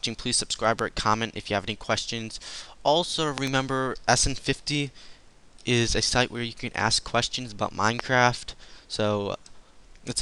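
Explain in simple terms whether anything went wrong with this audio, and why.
Loud pops cut in at 0.79–0.81 s, 3.38–3.49 s (a quick double pop) and 7.99–8.02 s, likely from a plug, switch or static jolt. Unlike a dropout, the sound carries on underneath.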